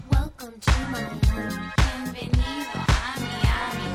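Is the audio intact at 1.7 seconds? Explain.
No, 1.7 s falls within a run of clock drift buffer slips from 0.41 to 3.41 s: regular clicks once per second, likely from two unsynchronised clocks about 200 ppm apart forcing a few samples dropped or repeated. Each shows as a waveform discontinuity and a thin vertical broadband line on a spectrogram.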